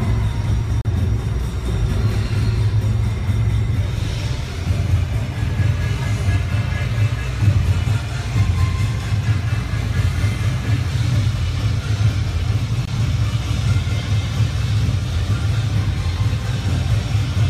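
Timestamps on adjacent 4-second stream segments leave small gaps, so the player pads the joins with silence. That produces a gap between stream segments, heard as hard-edged holes at 0.82–0.85 s (about 35 ms) and 12.85–12.88 s (about 21 ms), with nothing lost from the audio itself.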